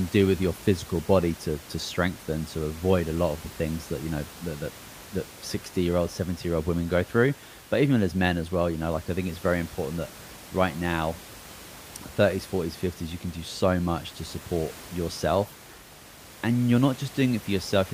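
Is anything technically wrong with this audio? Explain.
No, nothing is technically wrong with this audio.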